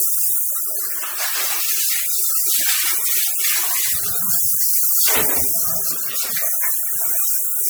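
Throughout, the sound is swirly, hollow and smeared, with blurred attacks, more damaged than one 96 kbit/s MP3 pass would explain. This points to generation loss, likely from re-encoding roughly seven times.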